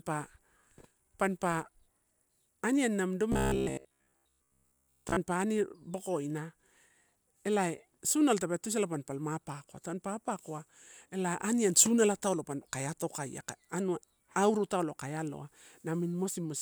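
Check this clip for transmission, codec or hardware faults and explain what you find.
One fault is present: robotic sound from repeated short buffers, between 3.32 and 5.17 s. Through that stretch the speech becomes a stiff, metallic buzz pitched at 66.8 Hz, still loosely tracking the syllables. The likely cause is audio arriving too slowly, so the playback side loops the most recent fragment, about 15 ms long to match that buzz, for most of the interval while the real signal is dropped. The loop rate sets the fixed pitch.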